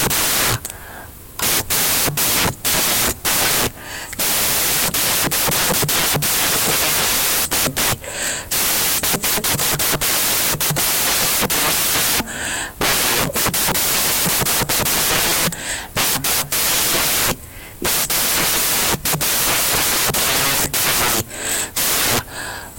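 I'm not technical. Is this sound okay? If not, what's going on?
No, it isn't okay. From start to finish this speech clip is buried under loud, hissing white noise, and the cause is samples built from the wrong bytes. Each sample in digital audio is stored as a pair of bytes, one for the big movements and one for the tiny detail. Here the player is putting those pairs together wrongly, so the jittery detail ends up treated as the main signal.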